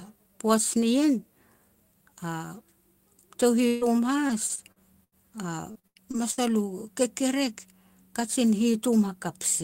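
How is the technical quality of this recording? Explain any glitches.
The quality's hurt by network dropouts in the middle of this speech clip, with three kinds of packet glitch between about 3.7 and 6.4 s.

From 3.67 to 3.84 s there's a burst of packet loss. About 140 ms goes missing, and the decoder stretches the last sound and fades it out before jumping ahead.

From 3.81 to 3.83 s there's a lost packet rebuilt from error correction. The decoder filled it from a low-bitrate copy in the next packet, so there's no gap, just a brief rough, noisy patch.

Repeated packet loss gives a choppy sound with pieces missing from 4.27 to 5.15 s and again from 5.72 to 6.39 s. Each stretch has five holes, the longest about 80 ms, and each is patched by extending the previous sound.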